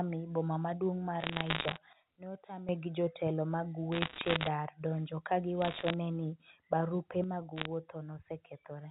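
Speech over a telephone-band line with bursts of sharp ticking crackle at 1.20–1.78 s after "boma maduong' mar", at 3.92–4.48 s between "gi jotelo mag" and "dar donjo ka", at 5.62–5.94 s and at 7.56–7.65 s. These are bit errors on a digital phone line: roughly one bit in a hundred to two hundred is flipped, and each hit on a sign or high-order bit throws a single sample far off. Twice the level drops abruptly, voice and background together, by about 14 dB from 1.93 to 2.69 s and by about 6 dB from 7.24 s after "ne ni barupe" to the end. These are sudden gain jumps, likely a digital gain change applied without a ramp. The G.711 A-law coding itself leaves only faint damage.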